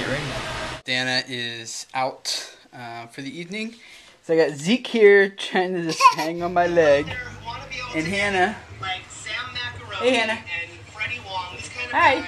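From 6.39 to 8.34 s a mains buzz sits roughly 20 dB below the signal. Sharp switching spikes at twice the 50 Hz mains rate spread harmonics into the kilohertz range, so it sounds raspy and bright rather than like a smooth, pure low hum.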